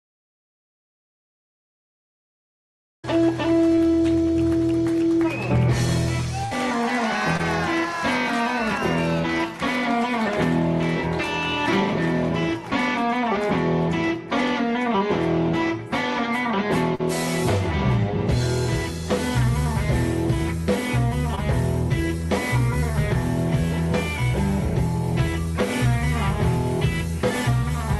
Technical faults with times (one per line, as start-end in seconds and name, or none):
3.75-3.79 short concealed packet loss
6.45-6.53 burst of packet loss
7.37-7.41 short concealed packet loss
16.95-17.01 short concealed packet loss
21.35-21.39 short concealed packet loss